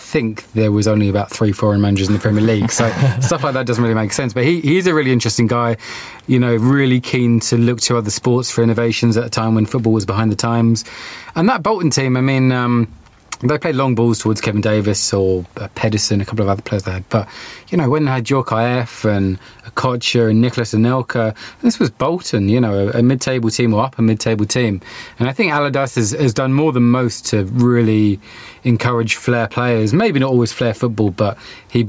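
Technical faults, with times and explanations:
Throughout, gain pumping: the level gets pulled down under each louder stretch of speech, swinging by around 10 dB, so everything sounds squashed. That's likely the input gain set far too high, with a fast limiter clamping every peak.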